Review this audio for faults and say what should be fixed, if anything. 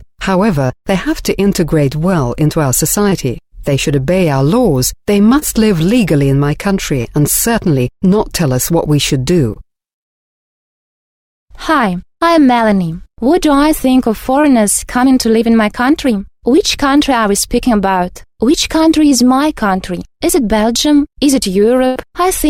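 Packets arrived too late or not at all at 0.67, 3.09, 5.39, 7.01, 9.54 and 14.41 s, each time about 20 ms of audio. This is short concealed packet loss: the receiver extended the preceding sound across each hole and blended back, leaving a brief smear or wobble.

At 21.87 to 21.97 s about 80 ms went missing in one run, a burst of packet loss. The receiver carried the last sound forward while fading it, producing a held buzz or dying hiss before the audio resumes further on.

Preventing both calls for a larger adaptive jitter buffer plus forward error correction or redundant packets on a more stable network path.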